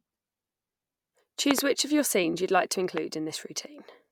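At 1.51 to 1.61 s, just before "which of your scenes", a loud pop arrives as two sharp pulses in quick succession, peaking about 20 dB above the speech. A second loud pop, a single click at 2.98 to 3.00 s right after "scenes you'd like to", sits about 15 dB above it. Both are most likely voltage transients from a plug, switch or static discharge added to the signal, and the speech continues underneath each one.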